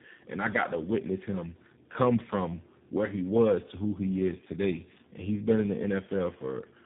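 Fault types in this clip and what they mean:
Tandem speech coding: The speech has been decoded and re-encoded at several links in a row. The sound points to three low-rate speech coders in sequence, consistent with AMR-NB, then G.726, then G.729A, joined by plain telephone-rate links. Each coder works on the already damaged output of the one before. The errors pile up. The voice comes out rough, muffled and warbly throughout. Nothing remains above 3.7 kHz.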